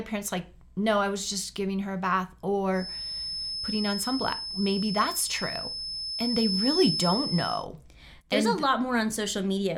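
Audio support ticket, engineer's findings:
Feedback whistle, 2.70 to 7.68 s. Thin, steady tone at 5.2 kHz sitting a few dB under the speech. Level swells and fades slowly. Likely cause: loudspeaker-to-microphone loop held right at the feedback point. One frequency sustains but never runs away.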